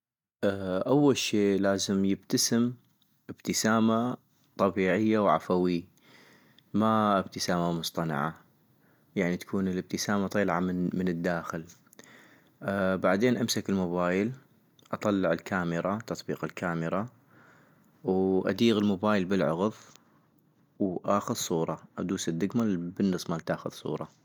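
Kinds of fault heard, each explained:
No technical faults can be heard anywhere in the speech recording, and the signal holds steady in level and continuity throughout.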